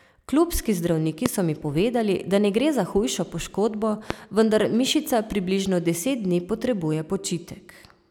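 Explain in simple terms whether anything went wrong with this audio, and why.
A sudden electrical jolt, likely from a plug, switch or static, got into the recording twice, causing a loud pop each time: at 1.26–1.28 s, just before "so mi povedali da", and at 4.10–4.13 s, between "gre za hujšo poškodbo" and "vendar mišica približno".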